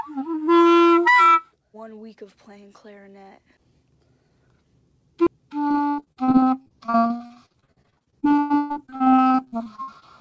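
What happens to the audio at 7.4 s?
At 7.4 s the audio sits inside a stretch of repeated packet loss (robotic sound) running from 5.68 to 10.04 s. Packets keep going missing or arriving too late, and each hole is covered by stretching the last received sound before the next dropout hits, dozens of times, with gaps up to 120 ms long. About 38% of that stretch is patched-in audio, so it sounds choppy and robotic, with pieces missing.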